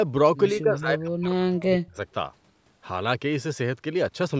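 Speech suppressed in double talk, 0.61 to 1.98 s: the speech sinks, at worst by roughly 35 dB. Likely an echo canceller, hearing both ends talk at once, mistook the talker for loudspeaker echo and turned everything down.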